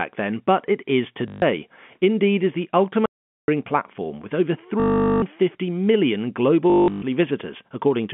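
Right after "then but it is", at 1.28 s, there's a short robotic stutter lasting about 0.14 s. That's packet loss with the last packet repeated: packets went missing and the receiver kept replaying the last good one until fresh ones arrived. The run buzzes at a rate that fits 20 ms packets, around 50 Hz.

From 3.06 to 3.48 s, between "is the" and "platform with over", the sound cuts to dead silence for about 0.42 s. There's no room tone at all, and whatever was said in that gap is simply gone. That's an audio dropout to silence, most likely the input dropping out while the recorder kept writing silence.

The same repeated-packet fault comes back twice more. Just after "platform with over", from 4.80 to 5.22 s, there's a longer 0.42 s stretch of that 50 Hz buzz. Then from 6.70 to 7.02 s the losses are scattered, adding up to about 0.30 s of replayed audio, and the longest unbroken run is 0.18 s. 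That one comes across as broken, stuttering bursts rather than a single drone. All of this sits on top of A-law G.711 telephone coding, which is why the whole clip has that narrow phone-line band.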